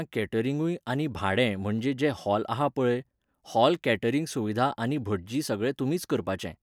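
A spoken recording with no technical faults to report. Nothing in it needs a time or a cause.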